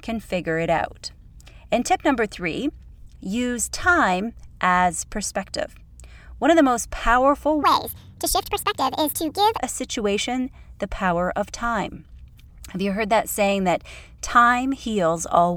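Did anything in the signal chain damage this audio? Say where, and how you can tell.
Yes. From 7.63 to 9.58 s a section at the wrong speed plays back 1.56 times faster than recorded, so the speech turns both hurried and high, roughly seven semitones up, then drops back to normal. The cause is likely a resampling or clock mismatch at the editing or playback stage for that span. Because pitch and tempo shift together and by the same ratio, this is a speed error, not a pitch shifter or time-stretch, which would change only one.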